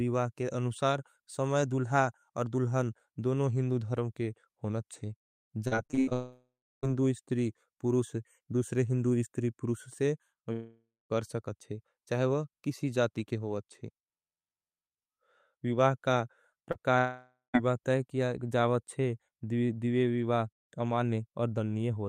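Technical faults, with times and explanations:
5.67–6.13 s: repeated packet loss (robotic sound). Seven separate holes open in under half a second, the longest 80 ms, and about half of this stretch is filled in rather than real. Each fill carries the previous sound forward, so the speech turns choppy, with pieces missing. On a spectrogram, harmonics go flat and smeared in short blocks with hard vertical seams between them. The waveform shows repeated, too-regular cycles broken by abrupt joins.
6.13–6.85 s, 10.53–11.12 s, 16.98–17.56 s: long network dropout. For roughly 0.6–0.7 s each time the speech simply disappears, most likely because the stream stopped arriving. The last sound is stretched into a fading buzz, then silence takes over: about 300 ms, 220 ms and 130 ms of it respectively. Speech resumes with that part missing. A spectrogram shows frozen, decaying harmonics followed by an empty band, and the waveform tapers to flat before restarting abruptly.
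16.72–16.81 s: short concealed packet loss. About 40 ms of speech never arrived in time and was patched by continuing the preceding sound before blending back into the real signal, leaving a brief smear or wobble and stretching the moment by about 15 ms. On a spectrogram it is a thin sliver of smoothed, slightly stretched harmonics, and the waveform shows a short overly repetitive patch.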